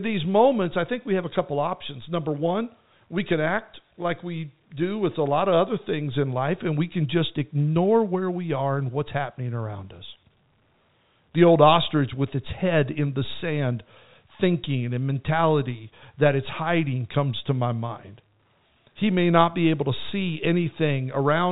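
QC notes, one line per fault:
No faults are heard in this speech recording. The G.711 telephone coding is audible as a narrow band, with nothing reaching above 3.8 kHz.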